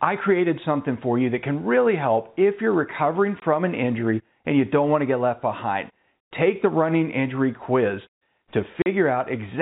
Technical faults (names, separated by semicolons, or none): packet loss filled with silence